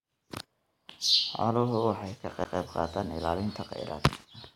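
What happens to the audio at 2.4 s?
At 2.44 s, just after "waxay ka", there is a CD skip. A knock or a flaw in the disc threw the laser onto another turn of the spiral track. The player mutes for a very short moment, roughly ten milliseconds, then carries on from a different point on the disc. You hear a small tick, and the speech jumps abruptly, so the sound after the tick does not follow on from the sound before it.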